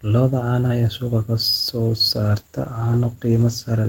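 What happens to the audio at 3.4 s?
At 3.4 s the sound is inside a call bitrate drop running from 2.16 s to 3.87 s. The encoder is starved of bits, so the speech turns coarse, watery and muffled, with highs cut away. This fits a fall from about 32 to 15 kbps.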